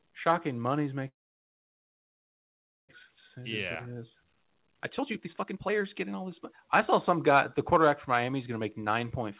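At 1.08 s the speech cuts out and stays gone until about 2.95 s, which is most likely a long network dropout. Apart from a brief trailing fill, it's nearly 1.8 s of silence, and about a second of the original speech never comes back.

From 3.08 s to 7.88 s you get the jitter buffer speed-up. The receiver is working off the backlog of roughly 0.7 s left by the dropout by snipping tiny pitch-period slices, so the speech runs about 16% fast, with pitch unchanged and a rushed feel, all within the 4 kHz telephone band.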